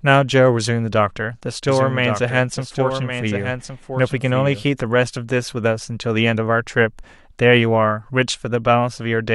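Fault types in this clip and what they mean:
Doubled audio track, 1.69 to 4.63 s: a second full-band copy of the speech trails roughly a second behind, about 5 dB quieter, with no decay or room colour, starting and stopping abruptly, likely from the signal being captured again through a slower path.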